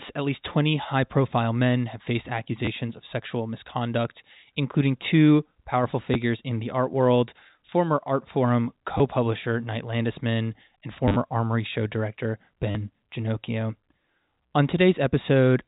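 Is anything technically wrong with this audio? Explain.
Yes. Packet loss with last packet repeated occurs at 2.65–2.67 s, 6.14 s, 8.98–9.00 s, 11.08–11.16 s and 12.71–12.75 s. When audio goes missing, the receiver replays the previous chunk until fresh data arrives. Single gaps of 10 ms suggest 10 ms packets. The replays seldom line up with the speech's pitch, and the single 10 ms loss sounds like a small blip. The 40 ms run and the scattered 80 ms stretch, with runs up to 30 ms, stutter robotically with a 100 Hz buzz, all heard within a telephone band that stops at 4 kHz.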